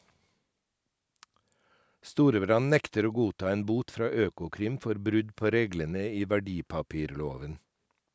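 No technical faults can be heard in the speech; it carries the usual traits of a call's microphone processing, with the lowest bass trimmed and nothing above 8 kHz, as that path normally leaves it.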